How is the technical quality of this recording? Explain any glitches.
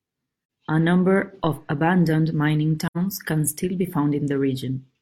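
The recording has two kinds of glitch: brief dropouts and a single low thump.

AAC frame loss with muting at 0.41 to 0.49 s and 2.87 to 2.97 s: about 85 ms of audio, which fits two lost frames, was zeroed by the decoder. This leaves a soft-faded hole that shows as a blank vertical gap on a spectrogram.

DC step at 1.44 s: the waveform's baseline jumps abruptly and then drifts back as a 2 Hz high-pass decay. It is heard as a low thump while the speech continues.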